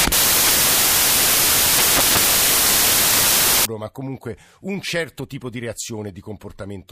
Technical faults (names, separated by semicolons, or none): samples built from the wrong bytes